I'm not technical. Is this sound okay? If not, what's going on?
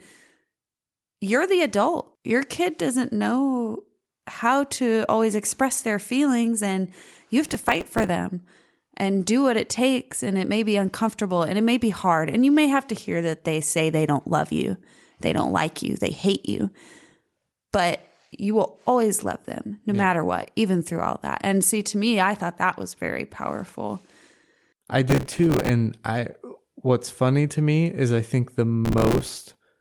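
No. The computer handling this speech was too busy to prepare each tiny chunk of sound on time, causing processor overload crackle at 7.45–8.09 s, 25.10–25.69 s and 28.85–29.55 s. Dozens of missed chunks, each a few milliseconds of repeated old audio, add up to brief gritty crackling.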